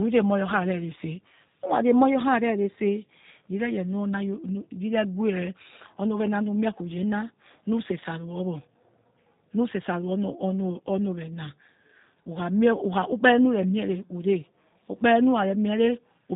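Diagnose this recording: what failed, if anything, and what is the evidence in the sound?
The failure is at the codec stage, and it runs through the whole recording. This is G.729 codec damage, and it is plainly audible. The speech has a rough, synthetic edge. Nothing passes above about 3.8 kHz, so sibilants and breath sound dull. The coder discards the waveform and rebuilds each 10 ms frame from a vocal tract filter, a pitch predictor and a few pulses. The coarse, buzzy texture fits an 8 kbit/s G.729A-type coder.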